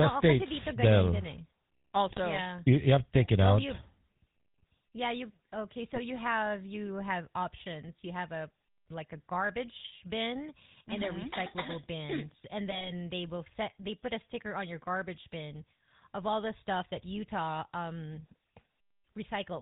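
From start to finish the sound passes through the GSM full-rate codec. Its bitrate of about 13 kbps fits that codec, which rebuilds the signal from a vocal-tract filter driven by a sparse, regularly spaced pulse excitation, with nothing kept above 4 kHz. The result is a plainly audible buzzy, gravelly roughness over the speech and a dull top end.

GSM bit errors come next, first at 2.06 to 2.19 s. Corrupted bits reach the decoder and scramble its filter, pitch and gain values for several consecutive frames, so the spectrum warps and the level jumps, giving a brief squawking, gargling burst. A shorter burst follows at 5.93 to 6.00 s, right after "yeah you okay" and before "have you", and pops break through there. The longest run, from 12.70 to 12.91 s, just before "they will set they", sounds like a stretch of garbled, crackling gurgle.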